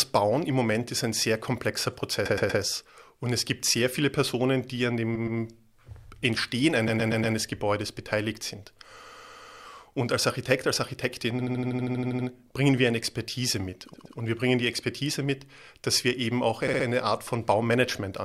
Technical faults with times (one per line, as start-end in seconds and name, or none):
2.25-2.61 repeated frames
5.15-5.39 repeated frames
6.87-7.35 repeated frames
9.03-9.63 repeated frames
11.39-12.27 repeated frames
13.93-14.17 repeated frames
16.67-16.85 repeated frames